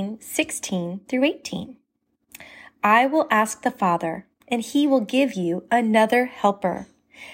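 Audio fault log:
No fault is found in this speech clip.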